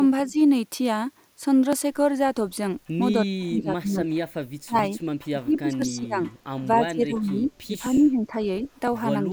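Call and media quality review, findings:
Speech dips at 0.27–0.37, 3.35–4.11, 4.63–4.94, 5.31–6.19, 6.61–8.67 and 9.25–9.32 s, up to about 30 dB. Likely speech suppressed in double talk by the echo canceller.

Periodic USB or driver dropouts: ticks every 1.02 s, 0.71 to 8.88 s. Each skips a couple of milliseconds. A blocked bus or driver is the probable cause.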